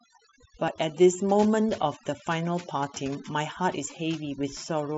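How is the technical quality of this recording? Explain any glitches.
The recording is compromised by overdone noise removal running throughout. The noise reduction was set too aggressively, pulling individual frequency bands down or out wherever they sat near its noise estimate. Quiet speech detail went with them, leaving a lowered background that breaks up into twinkling specks. The band-limited top end, with nothing audible above about 7.7 kHz, is consistent with a Bluetooth mSBC headset link working as expected.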